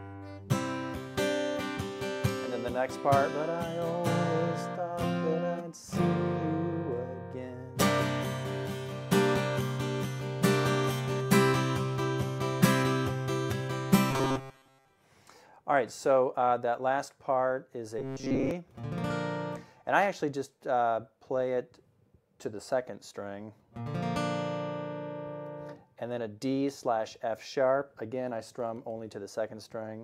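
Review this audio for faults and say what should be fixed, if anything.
Robotic sound from repeated short buffers at 14.11–14.88 s and 17.99–18.51 s: a rigid 134 Hz buzz, likely from starved playback repeating a roughly 7.5 ms buffer in place of most of the audio. Keep the input stream fed, or enlarge the buffer, so playback never runs dry.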